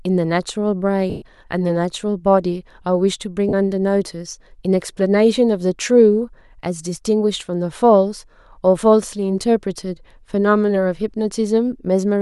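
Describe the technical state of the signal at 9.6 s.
At 9.6 s the signal is intact, with no audible fault at that moment.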